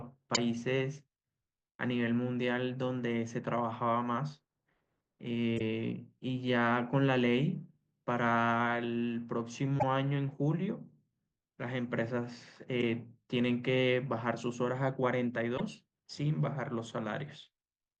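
At 0.33–0.38 s, 5.56–5.61 s, 9.76–9.83 s, 12.78–12.83 s and 15.54–15.61 s the speech breaks into a brief chirp, squawk, click or short hole, each roughly 50 to 75 ms long. This is damaged data in a compressed stream: corrupted bytes make the decoder misread frames and lose sync until it finds the next valid header. On a spectrogram each shows as a narrow vertical smear or gap; the waveform shows a short, jagged burst or a brief hole.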